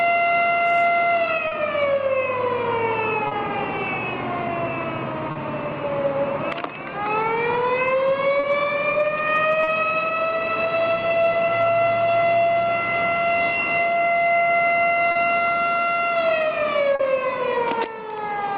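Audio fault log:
1.47 s, 3.27 s, 5.31 s, 8.39 s, 9.63 s, 15.11 s and 16.95 s: short concealed packet loss. Each time about 40 ms of audio failed to arrive, and the receiver filled it by extending the preceding sound, then crossfaded back within roughly 70 ms, heard as a brief smear or wobble, set against the call codec's usual coding noise and its 12 kHz cutoff. Unlike a plain dropout, the sound never falls silent; it is stretched rather than cut.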